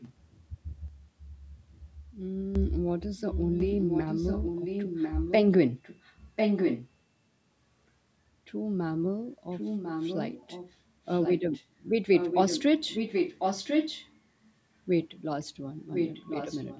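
A faint second copy of the speech trails the original by about 1.05 s from 0 to 0.5 s, likely an echo leak from a far-end loudspeaker that its echo canceller failed to suppress. From 0.88 to 2.55 s, speech and background drop together by about 8 dB, abruptly and without a fade, likely a sudden gain jump applied with no ramp. The same delayed echo returns very faintly at 1.57 to 1.94 s. It is much stronger, sometimes as loud as the speech itself, at 3.18 to 5.37 s, 5.7 to 6.9 s, 9.5 to 11.65 s, 12.11 to 14.2 s and 15.92 to 16.8 s.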